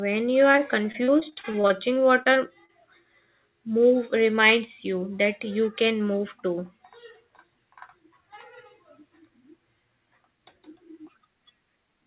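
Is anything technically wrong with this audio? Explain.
Yes, there are two packet-loss problems early in this speech clip, both on a call path that sounds like G.711 mu-law, with nothing above 4 kHz.

The first is a short concealed packet loss at about 0.52 to 0.56 s. Around 20 ms of audio didn't arrive in time, and the receiver bridged the hole by extending the sound just before it, then crossfading back into the real signal. You hear it as a brief smear or wobble in the speech.

The second is repeated packet loss, running from about 0.92 to 2.71 s. Over that stretch a dozen or so short holes pile up, the longest about 37 ms, and concealment fills roughly 17 percent of the span. Each patch extends the last bit of sound before the next hole hits, so the speech turns choppy and robotic, with small pieces dropped along the way.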